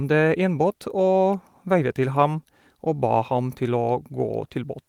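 No technical faults can be heard in the speech at any point.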